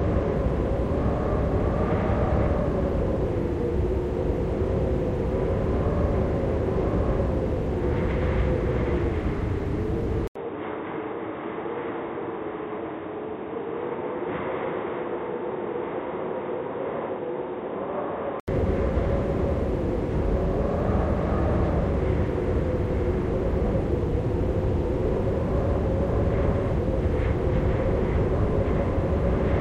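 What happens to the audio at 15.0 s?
At 15.0 s the audio is inside an input switched to a poorer device, running from 10.27 to 18.48 s. The recording likely changed to a narrower-band input: after an 80 ms gap, nothing above 3.8 kHz remains, so the sound turns dull and boxy, slightly quieter, with faint new background noise.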